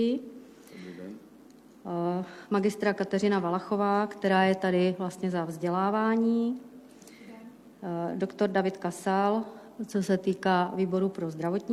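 At 2.31 s, AAC frame loss with concealment produces a brief smeared, noisy patch lasting about 43 ms, which fits a single lost AAC frame. The decoder filled the gap from the preceding spectrum rather than leaving silence, so there is no hard click or dead gap of a plain dropout.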